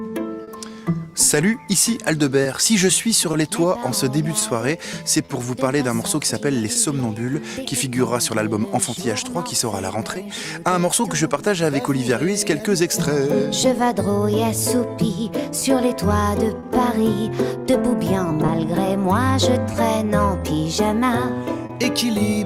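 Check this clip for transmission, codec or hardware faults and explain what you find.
Two transmission faults are present: clock drift and scattered short gaps.

Clock drift between sender and receiver: throughout the clip there are small, recurring timing hiccups at uneven intervals, with brief slivers of sound repeated. The sender's clock runs about 2% slower than the receiver's, so the jitter buffer keeps draining and the receiver pads it by repeating short pieces.

Scattered short gaps: between 0.43 s and 21.71 s, roughly fifteen brief ticks and smears break the sound, the longest around 40 ms. Packets were lost or arrived late, and each hole was patched by continuing the last sound, filling about 300 ms in total and adding about 139 ms to the length overall.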